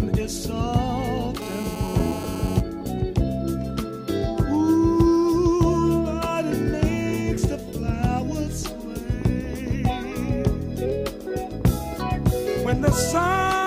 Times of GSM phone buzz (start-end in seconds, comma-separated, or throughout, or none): 1.42-2.60